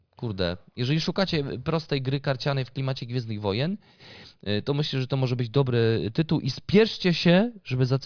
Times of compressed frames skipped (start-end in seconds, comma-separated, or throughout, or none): none